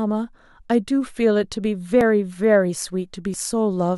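At 2.01 s and again at 3.34 s the sound jumps forward with no gap of silence, as if a sliver of the utterance had been snipped out and the ends spliced together. Each skip loses only about 10 ms, so no syllable goes missing. The likely cause is a dropped buffer (overrun): the recording side fell behind, fresh samples overwrote the uncollected block, and the recording was joined straight across the hole.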